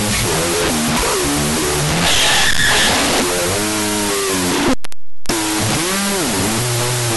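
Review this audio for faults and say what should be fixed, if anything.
A wrong sample width runs through the whole recording: speech stored as 16-bit integers is being read back as unsigned 8-bit samples. Each original sample is split into two bytes that are treated as separate values, so the low bytes become loud, broadband noise, and only the high bytes still carry the voice, buried. Twice as many samples play at the same rate, so the speech runs at half speed and sits an octave low. The fix is to decode the data with the 16-bit format it was written in. Prevent this by passing the sample format explicitly alongside the data, and checking it against the file header, at every point where audio is read or handed between components.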